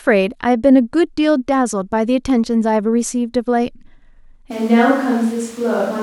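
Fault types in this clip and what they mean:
Switch to a distant microphone: from 4.52 s to the end, the speech abruptly turns roomy and hollow, thinner in the bass, and drops by about 5 dB, while room noise rises to roughly 25 dB below the speech. The likely cause is the close microphone dropping out, leaving a pickup further away. Unlike a plain gain drop or an equaliser change, the sudden added reverberation and background noise show that the microphone's distance changed.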